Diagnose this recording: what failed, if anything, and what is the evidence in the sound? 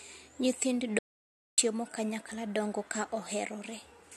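An audio dropout to silence runs from 0.99 to 1.58 s, removing about 0.59 s mid-flow before "kanyakla dongo ka" resumes. The waveform is flat and the spectrogram fully blank, with no room tone, pointing likely to a lost input device or link while recording continued.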